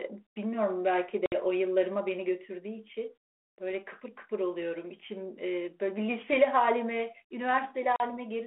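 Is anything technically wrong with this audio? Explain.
Yes. There is packet loss on an ADPCM call, heard twice in this speech: at 1.26 to 1.40 s (about 60 ms missing, roughly three packets) and at 7.96 to 8.04 s (40 ms missing). Each gap is a hard-edged silence. The lost samples meant the decoder's adaptive predictor and step size drifted from the sender's, so the speech resumes with brief, slight distortion until it resynchronises. The light, 300 Hz to 3.4 kHz coding fits 32 kbit/s G.726.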